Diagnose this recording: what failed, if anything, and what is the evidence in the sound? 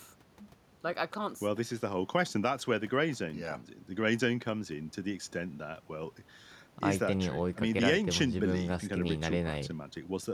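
Nothing failed in this recording, and the sound offers no evidence of a fault at any stage.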